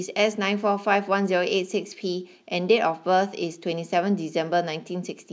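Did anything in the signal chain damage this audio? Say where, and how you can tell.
No, nothing in the chain has audibly damaged this speech recording: level, continuity and timing hold steady at every stage from capture to playback.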